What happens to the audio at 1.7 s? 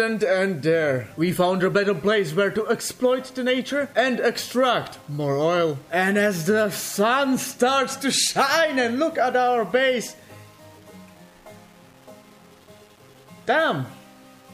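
At 1.7 s, like everywhere in the clip, there's a grainy, signal-following grit, likely from low bit depth without dither, which fits 8-bit rounding with error sitting around 35 dB down.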